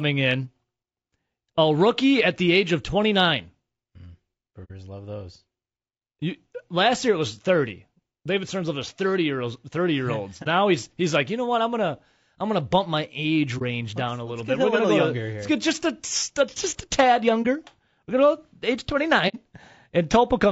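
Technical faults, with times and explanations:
throughout: low-delay AAC compression. The speech has a rough, grainy texture, with noise filling the gaps between pitch harmonics and a thin, somewhat synthetic upper band. The damage is plainly audible and is likely from AAC-ELD at a low bitrate, roughly 32 kbps. Its short analysis frames resolve the harmonic structure of the voice poorly and spend bits less efficiently, so at this rate the coder cannot keep the harmonics clean or the top band natural.
4.64–4.71 s, 10.43–10.47 s, 13.58–13.62 s, 17.42–17.46 s, 19.28–19.36 s: AAC frame loss with muting. The speech drops into brief silences of about 60 ms at 4.64 and 19.28 s and about 30 ms elsewhere. These fall just before "he's he's like you", between "gonna bump my age" and "down let's", and just after "a just a tad". The lengths fit one or two missing frames whose spectrum was zeroed. Overlapping windows fade each hole in and out, so the edges are soft.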